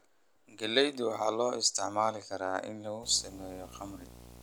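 From 3.03 s until the end of the speech clip at 4.43 s, a video or display buzz appears: a screen or video cable is coupling interference into the audio path. It sounds like a raspy buzz at the 60 Hz field rate with a fizzy hash on top, sitting around 20 dB below the speech. A spectrogram shows evenly spaced horizontal lines at multiples of 60 Hz plus a smeared wash above them. The waveform carries a repeating ripple every 16.7 ms.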